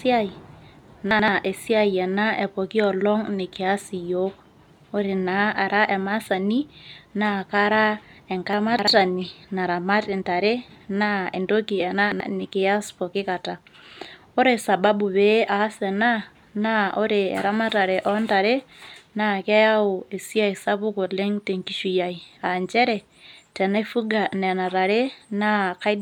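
At 1.11 to 1.28 s, 8.53 to 8.88 s and 11.95 to 12.20 s the speech briefly jumbles: chunks out of order. Blocks of about 85 ms play one, three and two positions late, so the sound is shuffled, with three hard joins at each spot. Unlike a dropout or a stutter, nothing goes missing and nothing repeats. The pieces are all present, just in the wrong sequence.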